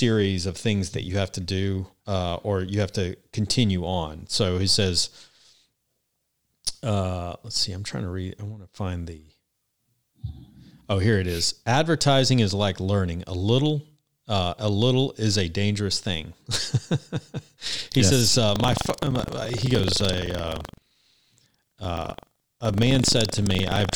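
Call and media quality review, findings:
Ring-buffer writer and hardware reader slipped, crossing each period: buffer tearing, 18.52 s onward, after "yes says". Roughly 10% of each buffer replays audio about 150 ms old. Robotic 23.4 Hz buzz at the hard joins, fits 2048-sample buffer.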